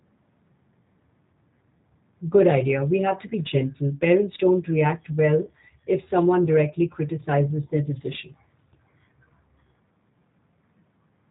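The whole clip has passed through a G.729 codec, which rebuilds speech from a vocal tract filter, a pitch predictor and a few pulses per frame, in a way that fits an 8 kbit/s stream. Nothing above 4 kHz survives, and the speech comes out plainly rough and slightly synthetic.

From 5.45 to 5.51 s, just after "don't react well" and before "if someone directly criticizes", a gap that fits a single lost 20 ms packet is covered by the speech codec's packet loss concealment. The decoder stretches its last pitch and filter into a brief fading buzzy tone or coloured noise, and the speech stays weakened for a moment after the packets resume.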